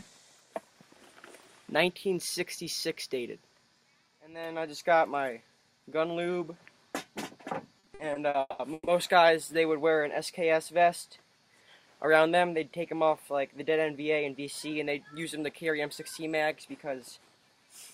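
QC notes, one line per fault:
7.79–8.89 s, repeated stalls (stutter): packets reached the receiver late or more slowly than they were played out, so the jitter buffer ran dry seven times in just over a second. At each gap the receiver filled in by extending the last sound, about 500 ms in all, with the longest single gap lasting 190 ms. Nothing is lost, but roughly 45% of this stretch is filler, so the audio drags and stutters.
12.77–17.27 s, jitter buffer speed-up: the jitter buffer was holding more audio than its target, as happens when delayed packets arrive in a bunch, so the receiver trimmed the backlog by repeatedly cutting out short slices of one or a few pitch periods. About 0.3 s was removed over this span, so the audio runs at 106% speed with its pitch unchanged. That is fast enough to sound hurried.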